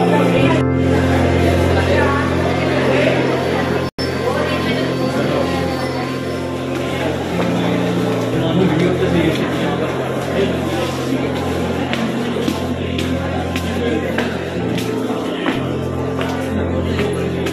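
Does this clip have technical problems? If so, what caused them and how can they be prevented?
Yes. A digital broadcast dropout occurs from 3.89 to 3.99 s. The sound cuts to silence for about 96 ms, then returns. The receiver muted after losing the signal or getting failed frames, which fits about four lost frames. Stronger reception or better error protection would prevent this.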